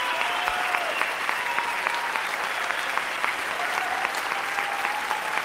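No technical faults can be heard anywhere in the audio. Nothing in it breaks, drops out or jumps at any point.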